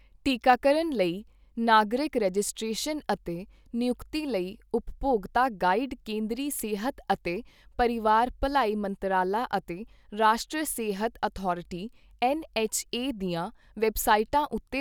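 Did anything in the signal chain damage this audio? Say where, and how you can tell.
No, nothing in the signal chain damaged this audio.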